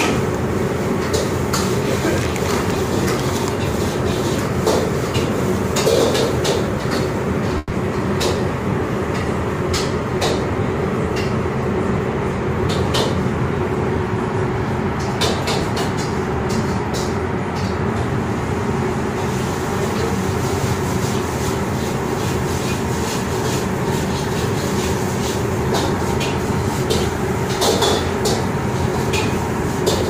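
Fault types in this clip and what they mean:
Call audio freeze: From 7.58 to 7.72 s the sound stalls, and the last moment is stretched into a fading buzz or hiss for about 120 ms. Likely the packets were held up and the jitter buffer ran dry. Playback then resumes where it stopped, adding a gap without losing audio.
Chunks out of order: At 15.63 to 15.65 s a 10 ms chunk plays one chunk too late, after the piece that should follow it. Nothing is missing, but the swapped order creates hard joins, heard as a brief jumbled moment.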